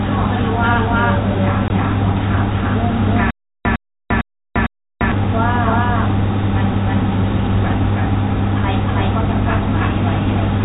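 Throughout the speech a doubled audio track is heard: a dry, full-band copy about as loud as the original trails it by roughly 0.3 s, likely from a second, slower capture path.

From 1.68 to 1.70 s, packet loss filled with silence cuts a hard-edged 20 ms hole, consistent with one lost packet.

From 3.31 to 5.12 s there is a stutter with silent gaps. A 107 ms fragment repeats four times every 453 ms, with 346 ms of digital silence between repeats, while the intended audio is lost. A stalled player or stream retrying is the likely cause.

All of this sits within a band-limited G.711 telephone signal.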